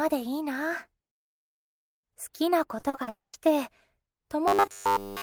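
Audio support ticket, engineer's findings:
Repeated packet loss (robotic sound), 2.79 to 3.09 s: choppy patch. Four gaps, longest 40 ms, about half of that stretch concealed by stretching the last bit of sound. Jitter buffer/network side, holes back to back.

Right after, 3.09 to 3.35 s: sound cuts out, brief fading buzz, then about 170 ms of silence. Likely a long network dropout. Roughly 240 ms never played, and the sound resumes past the lost part.

4.48 s to end: rigid 100 Hz buzz over essentially the whole tail. Likely robotic sound from repeated short buffers. Playback loops a ~10 ms chunk (fits a 10 ms buffer) while new audio arrives too seldom and real sound gets skipped.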